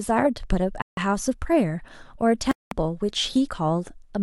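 Speech cuts to silence twice: about 0.15 s at 0.82 s, and 0.2 s at 2.51 s. Each gap is likely a Bluetooth stall, where the buffer ran dry before delayed packets arrived.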